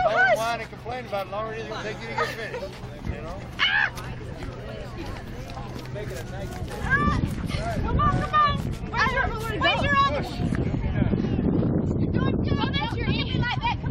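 No audible technical faults.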